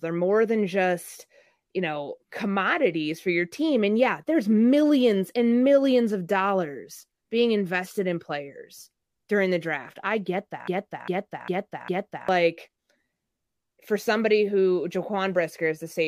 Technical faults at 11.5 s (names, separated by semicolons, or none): broken-record loop